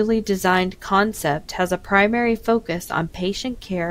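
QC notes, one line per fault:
No faults detected in this clip.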